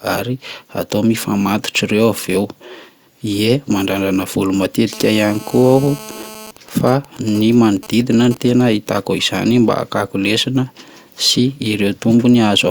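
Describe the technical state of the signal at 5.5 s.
At 5.5 s there's GSM phone buzz, running 4.93 to 6.51 s: a nearby phone's radio bursts get rectified into a steady, raspy 217 Hz buzz about 18 dB under the speech.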